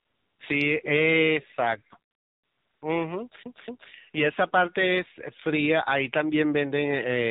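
The whole clip goes through the AMR narrowband mobile codec: nothing above 4 kHz, and a buzzy, synthetic speech quality that fits a low mode around 7.4 kbps. From 0 to 0.4 s and again from 2.10 to 2.82 s there's AMR comfort noise, where the phone stopped sending speech frames and the receiver filled the gap with a smooth, steady synthetic hiss. Then from 3.43 to 3.91 s you get the CD stuck on one turn, with the same 0.24 s chunk playing twice, clipped by a brief mute at each jump, like a skipping disc.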